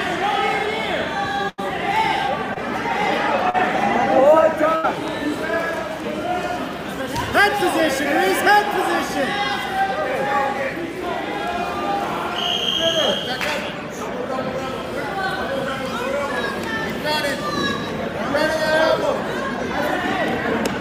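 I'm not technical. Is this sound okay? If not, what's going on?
No, there are a few dropouts from the audio being sent over a network in small chunks.

The bigger ones are a burst of packet loss, at 1.49 to 1.60 s and again at 4.76 to 4.85 s. Each time, roughly a tenth of a second of audio never arrived, so the receiving end kept stretching the last bit of sound and letting it fade, like a held buzz or a dying hiss. When the real audio comes back, that slice in between is simply gone.

The smaller ones are short concealed packet loss, at 2.54 to 2.58 s and 3.50 to 3.56 s. Here only a few hundredths of a second went missing, and the receiver patched over the hole by continuing the sound and blending back in. You'd hear it as a quick smear or wobble, and something very brief in that spot could drop out entirely.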